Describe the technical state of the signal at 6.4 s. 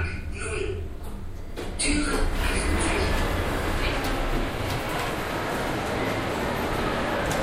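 At 6.4 s the signal is intact, with no dropout, distortion or other fault audible at that point.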